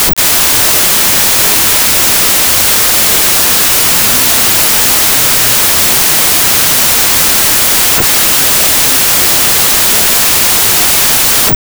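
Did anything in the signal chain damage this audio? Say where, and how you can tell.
Yes, at the sample-format conversion stage. From start to finish the speech sits under loud noise and plays at half speed, so it is pitched an octave low. That fits a wrong sample width: data written as 32-bit integers were likely read as 16-bit. Each original sample splits into two values, doubling the sample count and halving the speed. Only half of those values carry the signal's top bits; the rest come from low-order bytes and sound as noise.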